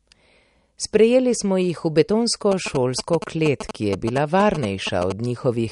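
Likely MP3 compression is starving the encoder of bits, which fits a low bitrate near 48 kbps, so nothing survives above 11.1 kHz and the speech turns watery and swirly throughout. From 2.52 to 5.12 s, GSM signalling bursts from a nearby phone get rectified, adding a galloping dit-dit-dit of short 217 Hz buzzes only slightly quieter than the speech.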